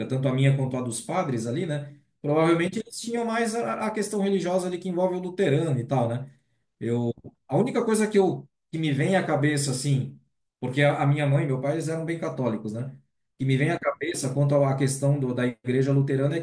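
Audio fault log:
No technical faults can be heard anywhere in the signal of this speech recording.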